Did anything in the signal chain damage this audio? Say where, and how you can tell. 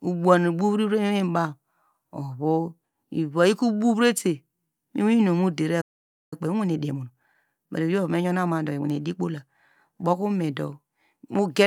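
Yes. The damage is at the playback stage. The player likely ran out of buffered data or had its output thread blocked, and this is a playback stall. The speech cuts off mid-flow at 5.81 s and the output stays silent until 6.33 s, a gap of about half a second. A dropout in the recording would not sound like this. The signal simply stops and then picks up again once the player recovers.

Right after the stall, from 6.33 s to 9.33 s, there is time-compressed catch-up. To work off the backlog that built up during the silence, the player removes short slices of audio and cross-fades across each join. As a result the speech runs at about 1.15 times normal speed for those three seconds. The pitch stays natural, which rules out a simple speed-up.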